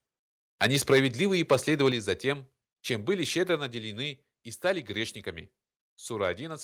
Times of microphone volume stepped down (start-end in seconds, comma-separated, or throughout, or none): 0.93, 1.92, 3.57